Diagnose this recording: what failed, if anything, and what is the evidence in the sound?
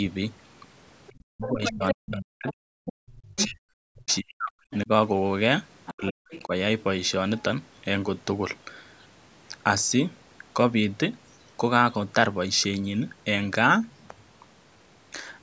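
The call's echo canceller likely failed to subtract the loudspeaker path, so the other side's voice leaks through at 1.07 to 3.44 s (about 10 dB below the talker), then 4.08 to 4.77 s and 5.86 to 6.42 s (about 20 dB below).

Speech is suppressed in double talk. The same echo canceller likely mistook simultaneous talk for echo and attenuated everything. From 1.23 to 4.89 s and again from 5.91 to 6.52 s, the talker's speech drops in pieces by as much as about 40 dB while the far side speaks.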